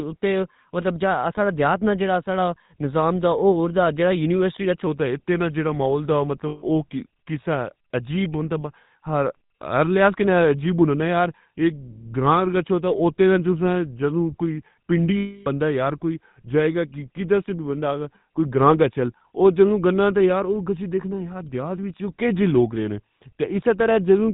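The whole recording has the buzzy, gravelly roughness of the GSM full-rate codec, with nothing above 4 kHz. That fits the 13 kbps full-rate coder, which models the vocal tract and drives it with sparse, regularly spaced pulses, so voiced sounds come out grainy.

From 4.87 s to the end, right after "دا جیڑا یونیورسٹی" and leading into "کوئی دیہات نا اٹھی", there's a section at the wrong speed. It runs at 0.879 times normal, so the speech turns slower and drops by about two semitones. That's likely a playback or edit clock mismatch.

There are two stretches of lost GSM frames, at 6.48 to 6.63 s (140 ms) and 15.17 to 15.47 s (300 ms). Each one fits several 20 ms frames going missing. The decoder repeats the last good frame, so you hear a rough metallic ring.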